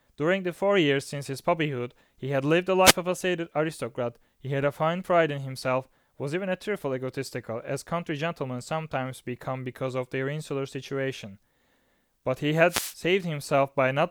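At 2.83 to 2.94 s and again at 12.68 to 12.95 s, the speech is hit by a wireless microphone noise hit: the FM radio link fades as reflections cancel, and receiver noise surges as a brief swish of static, lasting about 0.11 s and 0.27 s.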